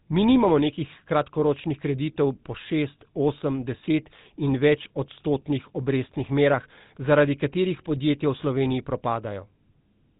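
A speech clip run through the GSM full-rate codec from start to finish. Nothing gets through above 4 kHz, and the pulse-driven vocal-tract model leaves a plainly audible buzzy, gravelly grit on the voice, which fits the old 13 kbps mobile codec.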